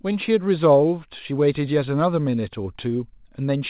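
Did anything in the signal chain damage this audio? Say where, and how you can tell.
No, nothing in the signal chain stood out as damaging this speech on listening; it carries the narrow, telephone-like bandwidth of a G.711 mu-law call path, with nothing above 4 kHz.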